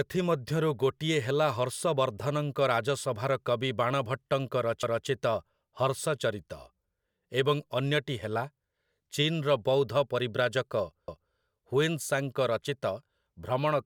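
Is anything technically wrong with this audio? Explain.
Yes. The speech has overlapping chunks at 4.83 to 5.08 s and 11.08 to 11.33 s. Each 6 s chunk starts 250 ms before the previous one ends, so that quarter-second replays at the join. It is heard as a brief stutter.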